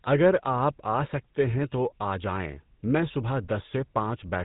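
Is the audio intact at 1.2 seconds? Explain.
No. At 1.2 s the speech carries GSM full-rate codec damage, present throughout: a pulse-driven vocal-tract model, near 13 kbps, leaves nothing above 4 kHz and a buzzy, gravelly roughness.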